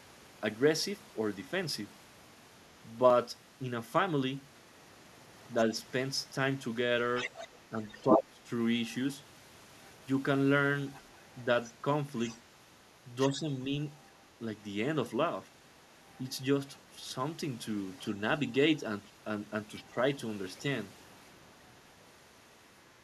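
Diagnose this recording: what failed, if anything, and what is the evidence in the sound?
Call processing likely failed here: the echo canceller left part of the far end's loudspeaker playback in the microphone signal. The other side's voice leaking through sits about 10 dB under the talker at 7.15–8.15 s, fainter at 10.94–14.66 s and 19.76–19.84 s, and barely audible from 22.81 s to the end.

In the same call processing stage, both sides talking at once likely confused the canceller, so it turned the near talker down along with the echo. This speech suppressed in double talk drops the voice by about 20 dB at 8.02–8.47 s, slightly at 13.3–13.49 s, and by about 10 dB at 19.86–19.96 s.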